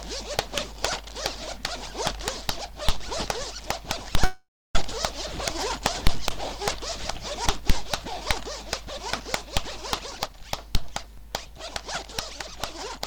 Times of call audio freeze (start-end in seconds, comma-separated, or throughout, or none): 4.24-4.76